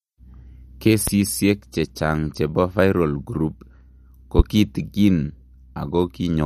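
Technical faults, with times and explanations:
Throughout, MP3 compression: nothing above 14.6 kHz and a clearly watery, swirly edge on the speech, likely from a starved encoder, which fits roughly 56 kbps.
1.08–1.10 s and 4.39–4.42 s, loud pop: sharp pops about 10 and 15 dB above the speech, likely voltage spikes from a plug, switch or driver glitch.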